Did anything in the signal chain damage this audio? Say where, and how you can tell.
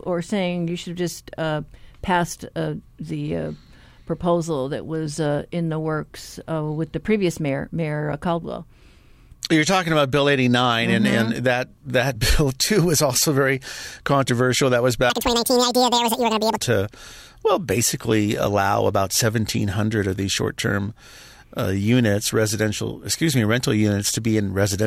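Yes. From 15.1 to 16.58 s the speech jumps to double speed and an octave higher, the classic sign of audio read two samples at a time (double speed). At the sample-format conversion or buffer stage, the reader treated pairs of samples as single frames, as if the data held two channels or samples twice as wide, so it got through them twice as fast. On a spectrogram, harmonic spacing and formants there sit twice as high, and syllables in the waveform are squeezed to half their length.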